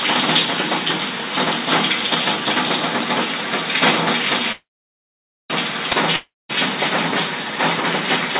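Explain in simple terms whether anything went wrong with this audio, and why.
Two separate interruptions break up this recording of everyday sounds.

At 4.52 s the sound stalls in a call audio freeze. The last bit of sound stretches into a fading buzz, and then there is about 0.87 s of silence. At 5.52 s it resumes exactly where it stopped, with nothing lost but now running about a second late. Packets that were likely delayed in transit left the receiver's buffer empty.

At 6.16 s a long network dropout follows. The sound again smears into a fading buzz and then goes quiet for about 0.21 s before returning at 6.51 s. This time about 0.34 s of sound never arrives and is skipped, likely because packets were lost on the network.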